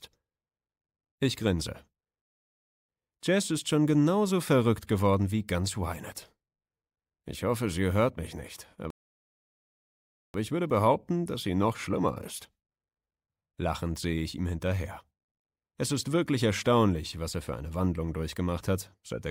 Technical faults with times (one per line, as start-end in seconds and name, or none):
8.90-10.34 rebuffering stall